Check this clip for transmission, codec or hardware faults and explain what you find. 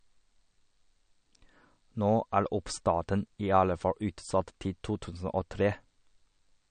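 One codec fault runs through the whole speech clip, likely MP3 compression at a bitrate around 40 kbps. Starved of bits, the encoder removed everything above 9.1 kHz and let weak frequency lines flicker between frames. The sound is plainly dull and watery, with swirly sibilants and smeared attacks.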